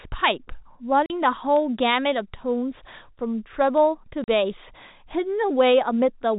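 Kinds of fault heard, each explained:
Word clock ticks: the receiving clock runs unlocked, roughly 70 ppm off the sender, so a sample slips about every third of a second, causing steady sharp ticks.
Packet loss filled with silence: missing packets were replaced by silence, leaving hard-edged 40 ms holes at 1.06 s and 4.24 s.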